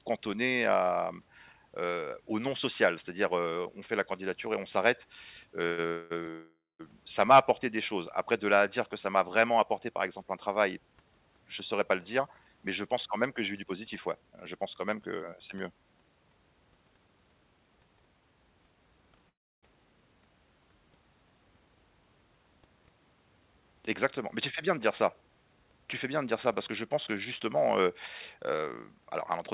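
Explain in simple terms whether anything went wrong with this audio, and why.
Call audio freezes at 5.66, 5.88 and 6.30 s, and again at 19.29 s. Each is likely caused by packets held up in transit. The receiver stretches the last sound into a fading buzz for 0.12, 0.23, 0.49 and 0.34 s, the last two dying into silence. The audio then resumes where it stopped, just before "ça m'a apporté des" after the 5.66 and 6.30 s freezes, with nothing lost.

Jitter buffer speed-ups run from 11.47 to 15.41 s, ending before "c'est mieux", and from 24.70 to 29.36 s. Extra audio had piled up, so the receiver trimmed tiny slices, roughly a third of a second in total each time. The speech runs about 7 to 8 percent faster at unchanged pitch and sounds rushed.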